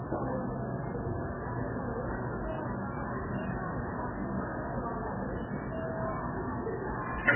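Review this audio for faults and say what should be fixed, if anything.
Throughout, the sound is watery with smeared attacks, likely MP3 compression at a bitrate around 8 kbps. A spectrogram shows a hard 3.1 kHz ceiling and flickering gaps. Encode at a much higher bitrate, or keep a lossless master.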